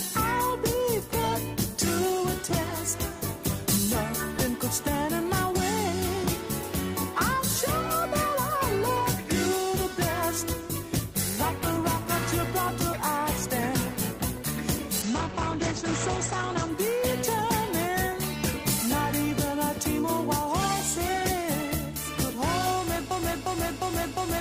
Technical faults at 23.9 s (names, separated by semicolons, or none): broken-record loop